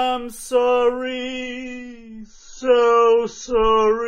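At 1.02 s the audio suddenly drops to a lower bitrate in the adaptive stream, with no gap: treble vanishes above 7 kHz and artefacts swell, which fits a fall to around 16 kbit/s AAC.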